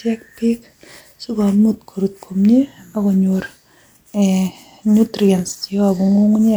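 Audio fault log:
Nothing to log here, as the speech runs along with no faults turning up anywhere in it.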